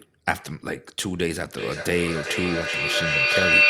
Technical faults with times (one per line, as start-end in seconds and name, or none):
1.54-3.69 feedback howl